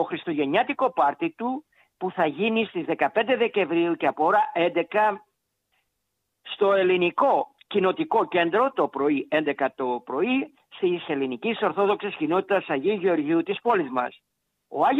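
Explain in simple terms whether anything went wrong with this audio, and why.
Nothing went wrong here: the audio runs without a single audible fault from beginning to end.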